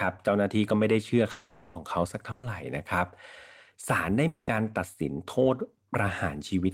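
From 1.31 to 1.77 s the sound is carried on as a fading buzz or hiss for about 440 ms before picking up further along, with that stretch gone. This is a long network dropout, likely a stall in arriving audio, and its length sets it apart from a short loss burst. At 2.31 to 2.45 s, a burst of packet loss leaves a briefer 120 ms held-and-fading tail, then the audio jumps ahead. At 4.27 to 4.49 s a second long network dropout runs 200 ms, and its fill dies into about 60 ms of silence.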